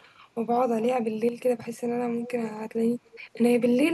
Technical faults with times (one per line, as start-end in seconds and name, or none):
1.29-1.38 one channel drops out
1.56-1.63 speech suppressed in double talk
2.22-2.31 echo leak
3.05-3.20 echo leak